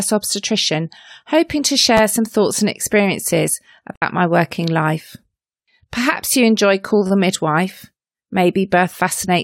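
Right around 1.97 to 2.00 s, just after "obstetrician hoping to" and before "some thoughts and experiences", there's a repeated buffer. A chunk roughly 10.7 ms long, which fits a 512-sample buffer, got played two extra times because fresh audio didn't show up in time. With a piece that short, the repeats run together into a tiny buzzy stutter with hard joins rather than an audible echo. Nothing actually goes missing. It's just delayed a touch.

Then at 3.96 to 4.03 s, between "some thoughts and experiences" and "my working life", you get AAC frame loss with muting. About 64 ms of audio is gone, which points to a few consecutive lost frames. The decoder zeroed their spectrum, and the overlapping windows eased the sound down and back up, so it's a soft-edged hole.

The repeated buffer shows up again at 7.07 to 7.10 s, the same roughly 10.7 ms chunk but with three extra plays this time. That makes it a slightly longer buzzy stutter than the first one.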